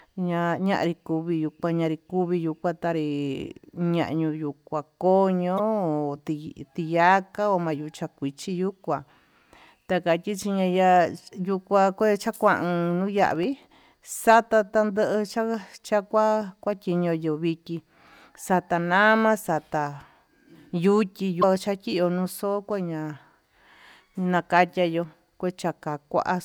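Just after "ma'a ko'ó", from 5.56 to 5.60 s, there is a short glitch. This is damaged data in a compressed stream. Some bytes in the file were wrong, so the decoder could not read those frames. It lost sync and hunted for the next valid frame header. The result is a brief blip of about 40 ms.

From 13.19 to 13.43 s, a gritty crackle rides on the speech. This is processor overload crackle. The processor fell behind and missed a handful of very small buffer deadlines, each well under a millisecond. Every missed buffer was filled with silence. Each one left a tiny hard-edged gap, and together these gaps make a quarter second of tearing.

At 21.40 to 21.44 s, the same damaged-stream fault returns. It is another blip of about 40 ms as the decoder resyncs.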